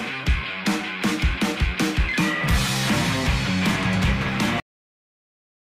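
At 2.42 s, compressed frames are skipped: a couple of damaged or missing frames, about 70 ms of audio, never reach the output, which fits two 32 ms frames. The sound jumps forward, and a spectrogram shows a sudden discontinuity in the pattern with no gap.

From 4.60 s the clip has a cut-off end. Playback stops mid-sound because the final buffers were never written. The waveform drops straight to a flat silent line with no decay, and the spectrogram goes abruptly blank for the remaining second or so.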